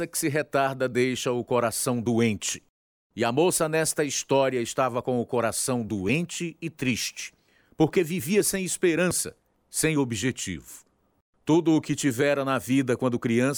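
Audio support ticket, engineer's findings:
Processor overload crackle, 9.11–9.69 s, after "triste porque vivia sem", before "sem objetivo". CPU missing deadlines on short buffers, skipped gaps. Burst of tearing, not one clean dropout.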